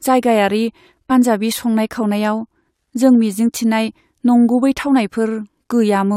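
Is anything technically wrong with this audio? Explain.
Yes. Damaged data in a compressed stream produces brief blips at 1.10 s and 3.87 s, where corrupted bytes make the decoder misread frames and resynchronise on the next header.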